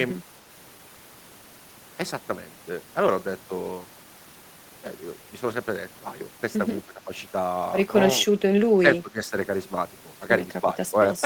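An echo canceller likely treated overlapping talk as echo, causing speech suppressed in double talk: the speech dips at 6.86–7.10, 8.73–8.86, 9.02–9.33 and 10.61–10.77 s. The third dip is deepest, about 15 dB.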